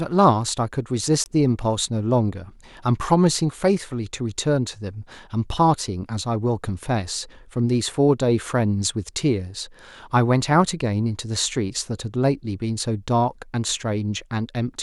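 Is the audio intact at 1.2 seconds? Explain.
No. Just after 1.2 seconds, from 1.24 to 1.26 s, the speech drops out completely for about 20 ms. The speech then resumes as if it had kept playing underneath, with nothing repeated. This is likely a Bluetooth dropout. Audio data failed to reach the headphones in time and was discarded, so the output fell silent. The short gap fits a single lost packet.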